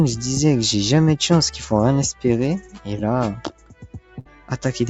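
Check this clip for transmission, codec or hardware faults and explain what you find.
There are three problems here, all from the call chain, on audio that tops out around 8 kHz as the call codec passes it.

Noise suppressor applied to music or sounds, throughout: a speech-tuned suppressor treats steady, sustained material as noise, so level pumps by around 10 dB and held sound thins out.

Sound cut by the noise suppressor, 2.61 to 2.87 s and 3.35 to 4.50 s: sustained and decaying parts get pulled down, by about 11 dB and about 12 dB at worst, while sharper onsets survive.

Burst of packet loss, 4.19 to 4.27 s: roughly 60 ms never arrived in time. The receiver stretched the last sound for 58 ms, fading it, then jumped ahead with that chunk missing.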